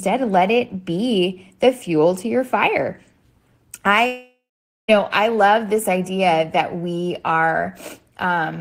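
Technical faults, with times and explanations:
4.07–4.9 s long network dropout: speech smears into a fading buzz, then 0.47 s of silence from likely lost packets; unlike a short glitch, the gap is never recovered.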